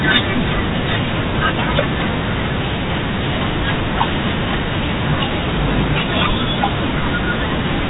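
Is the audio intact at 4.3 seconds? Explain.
Yes, at 4.3 seconds the speech runs on without any dropout, click or distortion, carried through the telephone-band G.711 coding with nothing heard above about 3.8 kHz.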